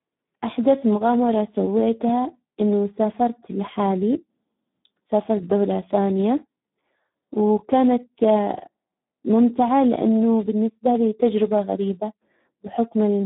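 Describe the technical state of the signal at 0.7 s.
At 0.7 s the Speex codec damage that runs through the whole clip is present. This low-rate CELP coding, which fits a setting around 8 kbps, starves the excitation of bits, leaving the speech hoarse, noisy and heavily degraded, confined to roughly 150 Hz to 3.6 kHz with nothing above 3.8 kHz.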